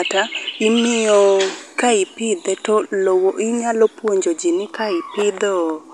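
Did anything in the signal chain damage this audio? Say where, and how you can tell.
No, nothing in the signal chain damaged this audio.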